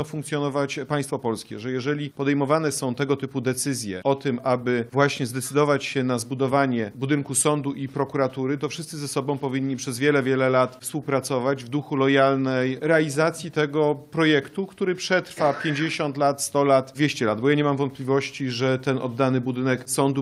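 No technical faults can be heard anywhere in the audio.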